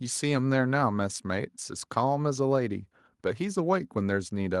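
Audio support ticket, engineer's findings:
No audible defects found on the speech capture; nothing to attribute to any component in the chain.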